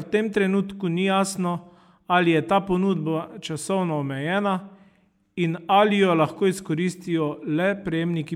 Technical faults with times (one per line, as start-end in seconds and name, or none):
none